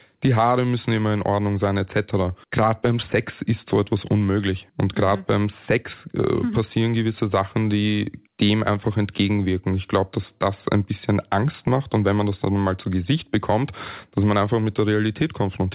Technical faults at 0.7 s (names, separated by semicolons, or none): none